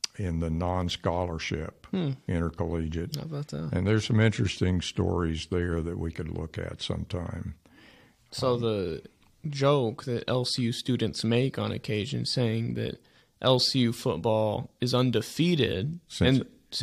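No technical faults can be heard anywhere in the recording.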